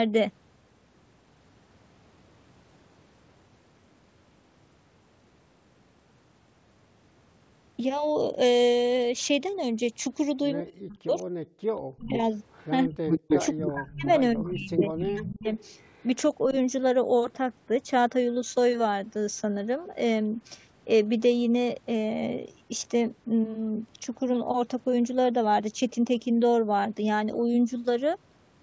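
From 10.61 to 11.27 s the voice sinks by roughly 40 dB, and again from 11.95 to 12.14 s by roughly 35 dB. This is speech suppressed in double talk, most likely because the echo canceller heard the far side at the same moment, could not separate the near talker from the loudspeaker echo, and turned everything down. Unlike the gating that follows, it bites into the voice itself, not the room sound between phrases.

Between those dips, at 11.55 to 11.62 s, only the background drops, by about 40 dB for roughly 70 ms. This is background gated by the echo canceller: the canceller clamps the microphone hard while the loudspeaker plays, then releases, so the room tone blinks out and returns without the voice being chopped.

From 12.12 to 15.03 s there is an echo leak, likely from a loudspeaker whose canceller let part of the far-end sound back into its microphone. A copy of the voice trails it by 250 ms at roughly the same loudness, so the voice is heard doubled and delayed. 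A much fainter return, roughly 30 dB down with the same 250 ms delay, recurs from 15.6 to 16.54 s.

Overlapping the loud echo, from 12.86 to 15.48 s, the voice is suppressed in double talk again, down roughly 30 dB across about two seconds of its span. A slight dip of roughly 5 dB follows at 16.51 to 16.55 s. Throughout, the band stops at 8 kHz, as expected from the G.722 call path.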